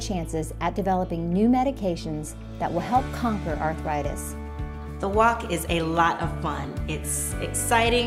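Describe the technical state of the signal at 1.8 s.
At 1.8 s the signal is intact, with no audible dropout, distortion, glitch or other fault at that moment.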